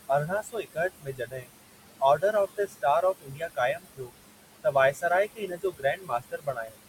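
Noise suppressor artifacts run through the whole of this speech recording. The suppressor pulls down the bands it judges to be steady noise by about 20 dB, frame by frame, so the room noise, roughly 12 dB under the speech, dips in the gaps and swells beneath the talking. Speech cut by the noise suppressor happens at 0.27–0.78, 1.01–1.5, 2.56–2.84, 3.21–3.58, 3.74–4.12, 4.92–5.04 and 5.35–6.78 s. In each span the suppressor mistook quieter parts of the speech for noise and turned them down with the background, by about 18 to 21 dB, but only about 9 dB near 5 s. Those stretches sound faint or swallowed, and the last span loses the most, about a second in total.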